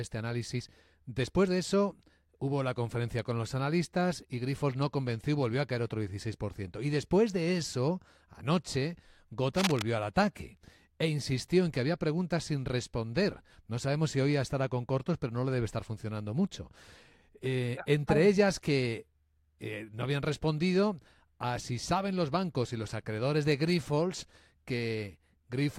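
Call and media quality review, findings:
Cable scratch noise, 9.57–9.82 s, just before "al ataque e insistió". Rough scratching burst nearly as loud as the speech. Likely a worn cable or connector moved, contact resistance fluctuating. Spectrogram: dense, irregular broadband streaks; waveform: ragged spiky envelope.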